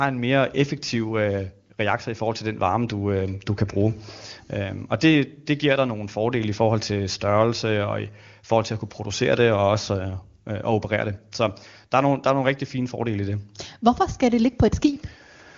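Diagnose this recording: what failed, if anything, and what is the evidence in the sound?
Nothing failed in this recording, and the sound gives no evidence of a fault at any stage.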